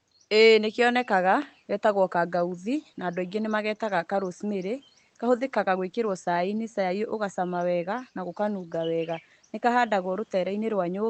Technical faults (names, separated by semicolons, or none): none